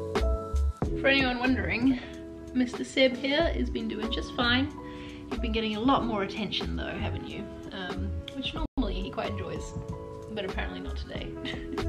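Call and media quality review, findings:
Playback stall, 8.66–8.78 s: player likely starved of buffered data or thread blocked; output drops to silence for 120 ms mid-flow, then resumes.

Time-compressed catch-up, 8.78–9.58 s: player trims backlog by cross-fading out small segments; audio runs about 1.15x fast at unchanged pitch.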